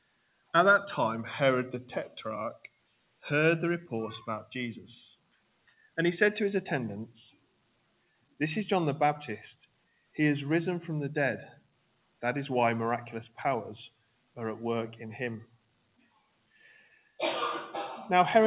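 A speech-tuned noise suppressor applied to music or sounds pumps throughout, with held tones and tails shifting a few dB while attacks mostly get through. This is level-tracking behaviour, not a dropout or codec warble. Sound cut by the noise suppressor sinks by up to about 21 dB at 0.01–0.54, 2.58–3.24, 5.17–5.97, 7.31–8.4, 9.6–10.16, 11.55–12.22, 13.89–14.37 and 15.45–17.19 s. Sustains sink in level and their decays are cut short, while sudden sounds mostly come through. Throughout, nothing is heard above 4 kHz, which fits a G.711 A-law call path at 64 kbps.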